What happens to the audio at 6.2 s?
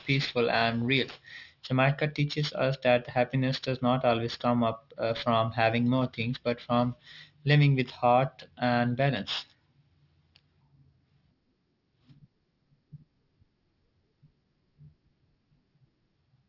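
At 6.2 s the speech sounds gritty and metallic, with sibilants splashing into harsh, unrelated tones and the spectrum running right up to a hard edge near 6 kHz. This is aliasing, and it runs through the entire clip, not just this moment. The audio was resampled down without a proper anti-aliasing filter, which fits a drop from 48 kHz to 12 kHz. Energy above 6 kHz folds back below it, leaving false components roughly 15 dB under the speech.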